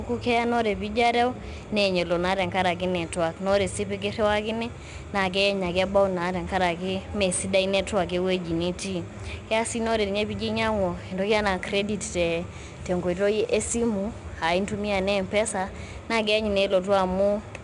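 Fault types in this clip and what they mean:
4-bit ADPCM compression: samples stored as coarse 4-bit steps from a prediction, giving plainly audible gritty hiss that follows the speech level, with nothing above 10.7 kHz.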